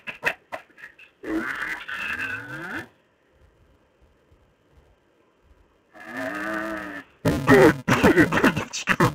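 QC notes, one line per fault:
Throughout: interleaved audio read as planar. Stereo pairs are split by block halves, so each 2.67 ms block plays its halves together at half rate, giving a dull, robotic sound that fits a 128-sample block. A steady 375 Hz buzz with no clear octave drop distinguishes this from pitch-shifting.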